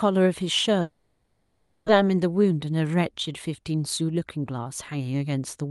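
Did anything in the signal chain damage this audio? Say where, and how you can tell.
Yes. The speech breaks up at the network stage from 0.81 to 1.90 s, a long network dropout. Instead of going silent, the receiver stretches the last sound into a fading buzz or hiss for the whole gap, and when the speech resumes about 0.9 s of it is simply gone. The likely cause is a stall in packet delivery: nothing arrived, concealment filled the hole, and the stream came back with a delay shift of roughly 150 ms.

The jitter buffer then sheds that excess delay through two jitter buffer speed-ups. From 2.43 to 2.67 s the speech runs about 18% fast, with roughly 50 ms trimmed. From 4.01 to 5.14 s it runs about 8% fast, with roughly 100 ms trimmed. In both stretches the pitch stays put while the pace tightens, because the buffer cuts whole pitch periods out of the signal rather than resampling it. The Opus call path's bandwidth limit of 12 kHz is present throughout.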